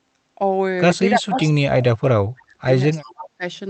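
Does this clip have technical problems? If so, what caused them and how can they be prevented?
Yes. Speech suppressed in double talk occurs from 1.12 to 2.69 s and from 3.02 to 3.43 s. The speech dips deeply, by about 35 dB and then about 25 dB, likely because an echo canceller mistook overlapping talk for echo. Full-duplex tuning and a well-coupled headset reduce this. An echo leak appears from 1.40 to 1.45 s: a brief copy of the speech returns 316 ms late, about 20 dB down, likely left by imperfect cancellation. Headphones or better loudspeaker echo cancellation prevent it.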